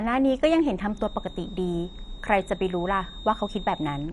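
A short bit of speech, and the whole thing carries the dull, gurgly, plainly granular texture you get from MP2 compression, likely an MPEG Layer II encode starved of bits. Nothing comes through above about 11.3 kHz, so the upper sub-bands have been switched off entirely, and what's left is coarsely quantised, which fits a low rate somewhere around 48 kbps, the kind of sound you'd know from cheap digital radio. Then from 0.88 s right through to the end there's a feedback whistle, a thin steady tone at 3.7 kHz sitting well below the speech, maybe 20 dB down, and slowly swelling and fading in level. That points to the speaker-to-mic loop likely hovering just at the edge of feedback, ringing on one frequency without ever running away.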